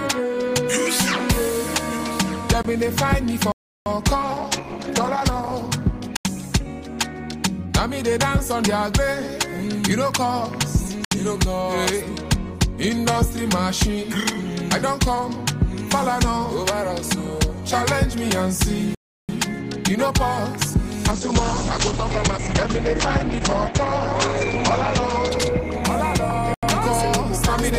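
Blocks of digital silence cut in at 2.63 s (20 ms), 3.52 s (341 ms), 6.17 s (85 ms), 11.05 s (68 ms), 18.95 s (341 ms) and 26.54 s (85 ms). The output buffer likely went unfilled, so the audio drops abruptly to silence and back. The longest gaps fit a 16384-sample buffer. The gaps are heard as holes.

A call bitrate drop runs from 4.22 s to 6.66 s, falling from 32 to 11 kbps. A second drop, from 21.13 s to 27.08 s, reaches 9 kbps and holds near that for about 3.8 s. There the encoder's bandwidth narrows from 20 kHz to 8 kHz, and the sound turns coarse, watery and muffled until the rate recovers.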